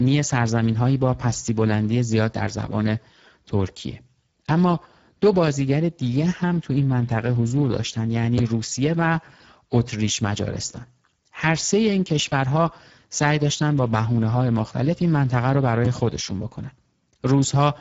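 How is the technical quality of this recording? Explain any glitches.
The speech is clearly degraded throughout by Speex codec damage. A CELP coder starved of excitation bits, probably near 10 kbps, turns speech noisy and hoarse, with only noise-like fill up to a cutoff at 7.7 kHz. Unlike transform-codec warbling, the roughness sits inside the voice itself.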